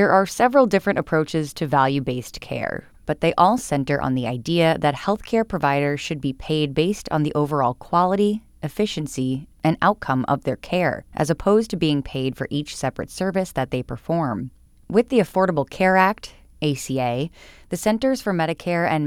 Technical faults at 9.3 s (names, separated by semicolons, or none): none